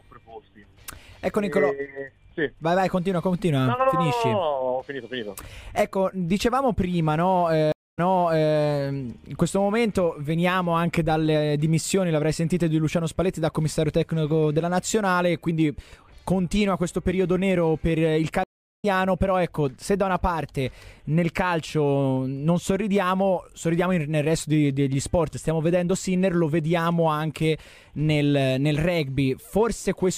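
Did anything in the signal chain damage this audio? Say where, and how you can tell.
Yes: two stream reconnects at the network stage. A 0.21 s gap at 7.72 s resumes 0.6 s earlier; a 0.37 s gap at 18.44 s jumps about 0.3 s ahead.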